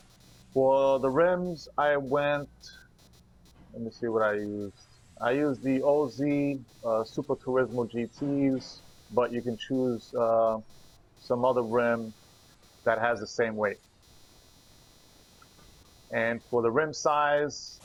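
Throughout the clip, changing load from the processor, graphics card or mouse disturbs the ground shared with the audio circuit, producing computer activity noise: a buzzing, chirping texture pulsing at roughly 300 Hz, around 35 dB below the sound, rising and falling with the computer's activity rather than the audio.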